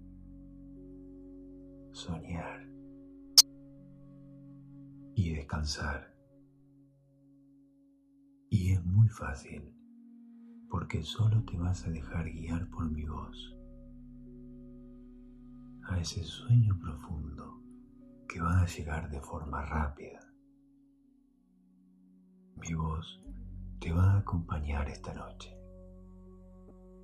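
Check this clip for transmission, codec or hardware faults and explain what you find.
Three short bursts of a corrupt frame decoded appear, at 3.37 to 3.41 s, 22.66 to 22.68 s and 26.68 to 26.71 s. In each, damaged bits in a compressed frame were decoded anyway, so misread codes and gains pushed energy into the wrong frequencies for roughly a frame's length. The first, spanning what sounds like a couple of frames, is a loud glitch peaking near -10 dBFS. The later two are brief glitches, much fainter.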